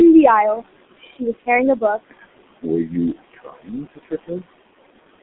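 From start to finish there are noise suppressor artifacts: the room noise, about 14 dB below the speech, gets pulled down by about 20 dB between phrases, then swells back underneath. The whole clip also runs through the G.723.1 codec at 6.3 kbit/s, squeezed into a 200 Hz to 3.6 kHz band, so it's heavily muffled and hoarse, with smeared consonants.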